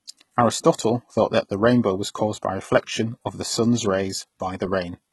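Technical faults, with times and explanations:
Throughout, HE-AAC compression, heavy: likely a low bitrate around 16 kbps, with treble rebuilt by band replication, lispy gritty sibilants, and nothing above 11.8 kHz.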